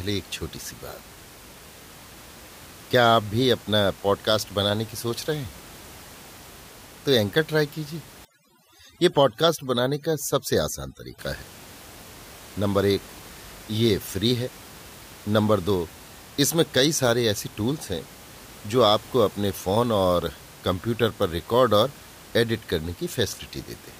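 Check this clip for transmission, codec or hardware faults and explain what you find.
One fault stands out, an overdone noise removal pass from 8.25 to 11.19 s. There the background room noise, otherwise sitting about 22 dB below the speech, drops and breaks up into twinkling specks. A noise reducer set far too aggressively is cutting individual frequency bands whenever they approach its noise estimate, taking quieter parts of the voice down along with the background noise.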